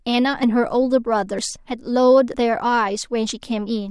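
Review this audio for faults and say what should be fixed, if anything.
Skips at 0.43, 1.39, 2.34 and 3.30 s each drop about 50 ms of speech, likely audio missing between 1 s chunks, spliced straight together. Double-buffer the capture so the next chunk is already recording before the current one closes.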